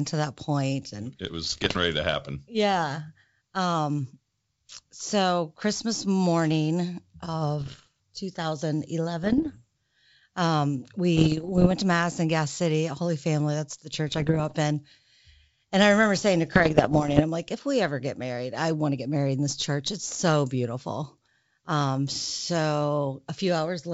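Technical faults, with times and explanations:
1.44–1.78, 7.60–7.87, 9.23–9.58, 11.17–11.73, 14.08–14.56 and 16.55–17.22 s, bit errors on an ADPCM link: flipped bits in the G.722 stream, about 0.5 to 1.5 percent, disturb the decoder's step size and predictor, producing pops and rough bursts that show as vertical broadband streaks and jagged level jumps.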